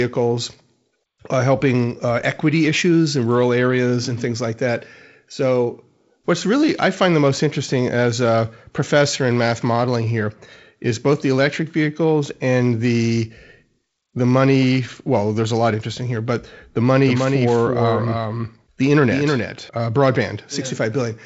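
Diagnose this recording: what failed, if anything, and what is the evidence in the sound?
From 17.07 to 19.69 s, just after "interesting here but the", there's a doubled audio track: a dry, full-band copy trailing around 300 ms, roughly 5 dB down, cutting in and out abruptly. Likely a slower second capture path, or an edit holding two copies out of step.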